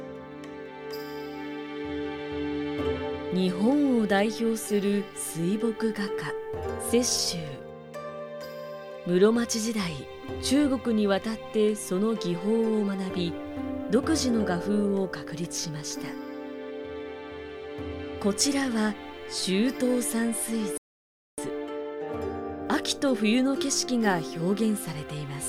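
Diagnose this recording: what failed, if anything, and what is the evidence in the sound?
A playback stall at the playback stage: from 20.78 s to 21.38 s the sound cuts out mid-flow for about 0.6 s, then resumes. The waveform drops to a flat line and the spectrogram shows a blank vertical band, likely from the player being starved of data or blocked.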